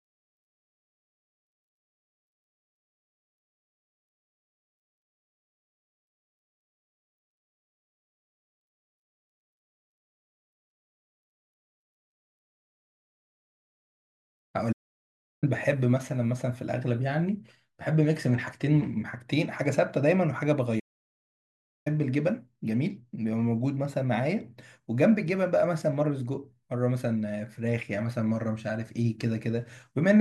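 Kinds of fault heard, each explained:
Playback stall: the speech cuts out mid-flow twice, for about 0.7 s at 14.72 s and about 1.06 s at 20.79 s, likely because the player ran short of data. The waveform drops to a flat line, and the spectrogram shows blank vertical gaps.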